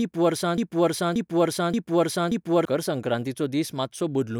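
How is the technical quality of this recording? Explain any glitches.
The recording has one clear glitch, a broken-record loop, in the speech from 0.58 s to 2.65 s.

Over that stretch a fragment of about 0.58 s plays four times in a row, each copy identical and butted directly against the next, so the speech stutters mechanically instead of moving forward. The likely cause is a stalled player, encoder or stream that kept resending its last buffered piece. Whatever speech belonged in those two seconds is missing and does not come back afterwards.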